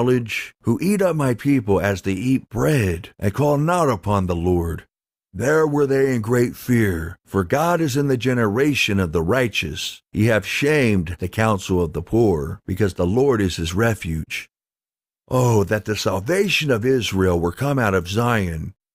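No technical faults are audible.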